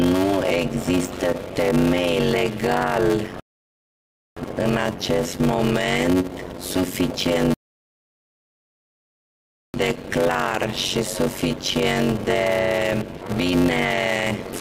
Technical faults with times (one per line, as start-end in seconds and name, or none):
0.00-14.61 block size mismatch (padded)
3.40-4.37 rebuffering stall
7.54-9.74 rebuffering stall